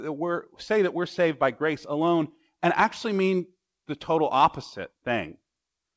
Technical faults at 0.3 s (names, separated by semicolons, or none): none